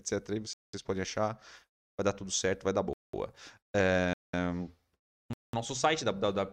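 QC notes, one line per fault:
0.53 to 5.53 s, gap between chunks: five 200 ms silences, at 0.53, 1.73, 2.93, 4.13 and 5.33 s. The first comes just before "podem achar vai dar", the third right after "tudo certo vai dar", and the last just before "nosso site". The speech plays in 1 s pieces with a dead 200 ms hole at each join, so nothing is lost. It just stops and restarts every 1.2 s, which gives it that stuttering, clipped rhythm.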